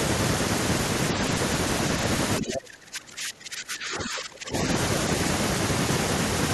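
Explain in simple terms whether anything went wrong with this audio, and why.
Something likely went wrong in the echo canceller: when both sides talked at once, it seemingly couldn't tell this speaker from the returning echo and turned everything down. From 2.39 to 4.55 seconds, this is speech suppressed in double talk, with the voice sinking far down.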